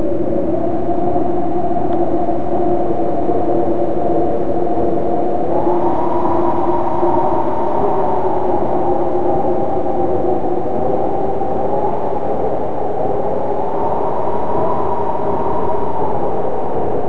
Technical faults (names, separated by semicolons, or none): none